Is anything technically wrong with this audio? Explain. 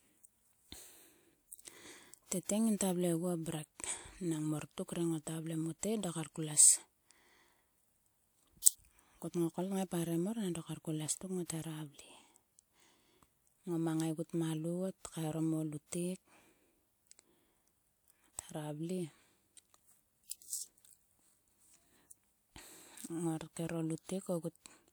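Yes, there's one fault. Around 8.62 to 8.66 s you get pre-echo: the codec smeared quantisation noise about 41 ms ahead of a sharp attack, so a brief hiss precedes it and the onset sounds softened.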